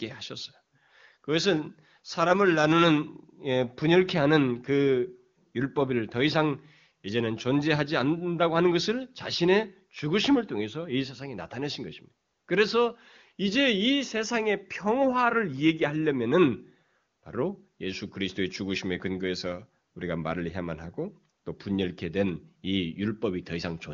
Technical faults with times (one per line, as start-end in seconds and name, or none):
none